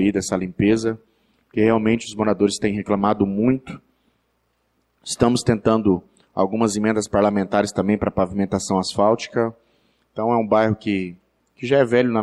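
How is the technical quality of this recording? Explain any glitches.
The recording has one fault, at the start. From 0 to 4.0 s, the adaptive stream is starting at a low bitrate. The player begins on a cheap version to load quickly. The treble sounds thin and smeared, which fits a low Opus rate. At 4.0 s it steps up cleanly, with no gap, reaching up to 20.2 kHz.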